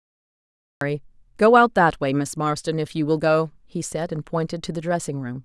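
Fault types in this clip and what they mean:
Cut-off start: capture began late, so the clip holds digital silence until 0.81 s and the speech then appears already mid-sound, with no natural onset. The waveform shows a flat line jumping straight to the signal; the spectrogram shows a hard vertical edge.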